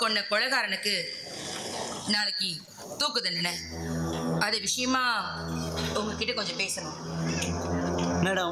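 Around 2.65 s there's a short concealed packet loss: about 20 ms never arrived, and the receiver patched it by extending the previous sound, leaving a brief smear.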